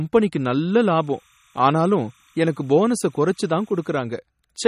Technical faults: MP3 compression; timecode bleed

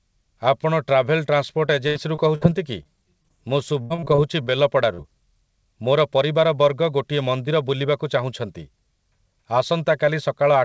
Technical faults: repeated packet loss (robotic sound); short concealed packet loss

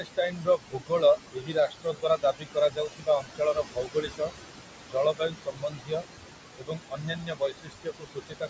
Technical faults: noise suppressor artifacts; speech cut by the noise suppressor

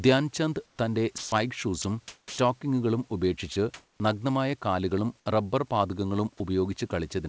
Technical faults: comfort noise in place of the background; sound dropped by the voice detector

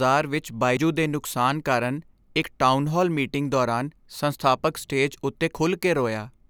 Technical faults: dropped buffer (overrun)

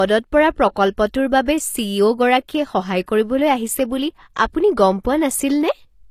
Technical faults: low-bitrate audio saved at a high bitrate

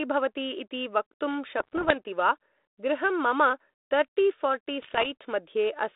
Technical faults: bit errors on an ADPCM link

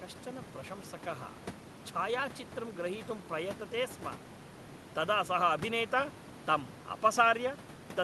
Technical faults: none

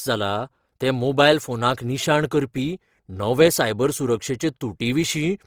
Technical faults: Opus compression

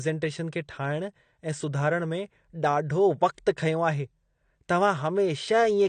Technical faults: AAC compression

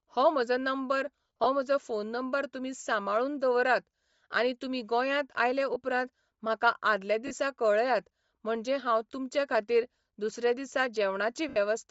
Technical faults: Bluetooth LC3 compression; lost LE Audio frames

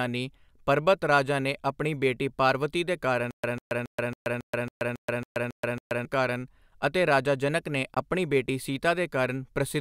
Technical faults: stutter with silent gaps; Bluetooth dropout

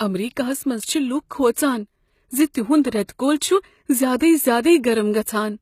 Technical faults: HE-AAC compression; pre-echo

